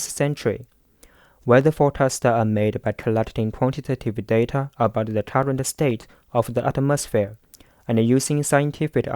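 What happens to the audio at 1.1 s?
CD scratch ticks run from 0.33 to 1.61 s: a disc blemish defeats error correction once per revolution, giving nine short ticks, the longest about 4 ms, through the speech.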